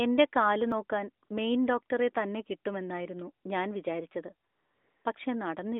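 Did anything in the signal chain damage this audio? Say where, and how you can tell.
Yes. A dropped buffer (overrun) at 0.72 s gives a small forward jump with no gap, skipping about 10 ms. This stage is driver or buffer: the software likely failed to read its samples before the hardware overwrote them, and the two sides were spliced together.

AMR comfort noise appears at 1.25 to 1.29 s (40 ms) and at 4.49 to 5.05 s (560 ms). The real background gives way to a smooth, steady hiss that switches in and out. This happens at the codec stage, where the phone's voice-activity detection stopped sending speech frames and the receiver synthesised noise.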